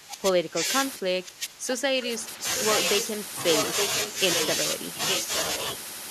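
From 0.0 to 0.65 s and again from 0.98 to 2.4 s the speech sinks by as much as about 25 dB, thinning and breaking into fragments. This is speech suppressed in double talk, likely from an echo canceller that could not tell the local talker from loudspeaker echo while both sides spoke, so it turned everything down. The audio loses level rather than gaining anything, which separates it from an echo fault.

From 2.56 to 2.6 s a brief scrap of the voice returns about 0.87 s late and about 10 dB below the speech. This is an echo leak, likely where a speakerphone's echo canceller let part of its microphone pickup of the far-end playback slip through and sent it back. The delayed repeat adds a sound rather than removing one, which sets it apart from the suppression.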